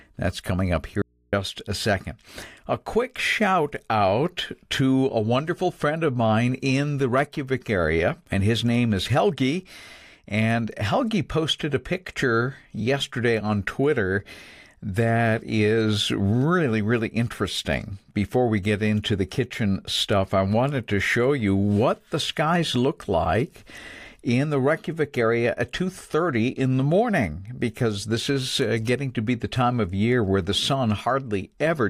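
At 1.02 s the speech cuts out abruptly for about 310 ms, until 1.33 s. That's an audio dropout to a faint residue, likely a brief loss of the signal while the input stayed live, so the gap holds only mains hum, roughly 40 dB below the speech.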